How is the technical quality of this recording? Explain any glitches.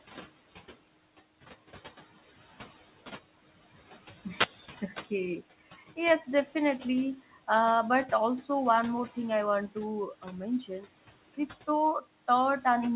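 The recording has three audible faults: steady noise suppressor artifacts, one wireless microphone noise hit, and one spot where the noise suppressor cuts into speech. The sound is also narrowband, with nothing above 4 kHz, which points to a G.711 call codec at 64 kbps.

Noise suppressor artifacts run through the whole clip. The suppressor estimates the steady background and lowers those bands frame by frame, here by about 14 dB. The room noise sits about 17 dB below the speech. So the background drops away in the pauses. It comes back up under the speech. The result is a pumping background rather than a constant one.

A wireless microphone noise hit occurs from 4.36 to 4.49 s. The radio link of an analogue FM microphone briefly faded. This happens when reflected signals cancel the direct one. The receiver's own noise then rises into the audio. It is heard as a short swish or burst of static, about an eighth of a second long, laid over the sound.

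Speech cut by the noise suppressor occurs between 10.61 and 10.87 s. The suppressor mistook part of the speech for background noise. It turned that part down along with the noise. The deepest drop is about 12 dB. Roughly 0.15 s of speech is affected in total. Those moments sound swallowed and faint.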